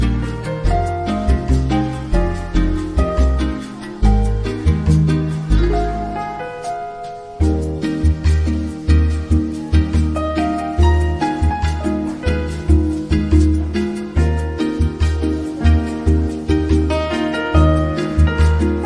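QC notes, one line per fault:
Nothing stood out on listening.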